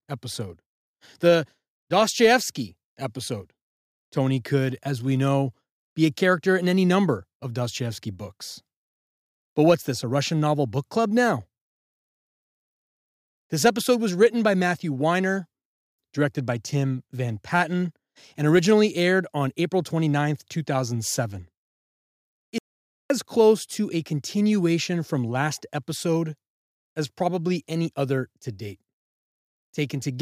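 An audio dropout to silence runs from 22.58 to 23.10 s: the speech cuts to silence with no room tone for about 0.52 s, likely from a briefly lost input.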